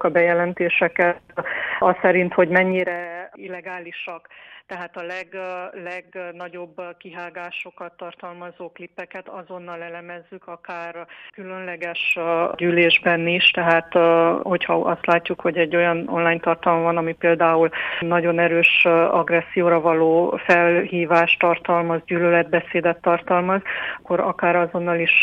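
From 2.68 to 3.08 s the level drops about 20 dB in 2 dB jumps, roughly 30 a second, and from 11.48 to 12.68 s it climbs about 20 dB in 1 dB jumps at a similar rate. This is zipper noise: each unsmoothed step puts a small click into the sound, so a ticking buzz rides on both fades. A waveform shows a staircase envelope, and a spectrogram shows faint vertical lines at each step.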